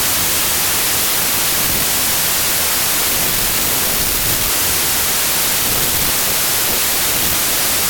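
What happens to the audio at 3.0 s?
At 3.0 s the speech sits buried under loud, harsh noise, dragged to about two-thirds speed with its pitch lowered to match. This is a wrong sample width fault running throughout: packed 24-bit samples read as 16-bit, so most values splice mismatched bytes and only some keep the signal's top bits.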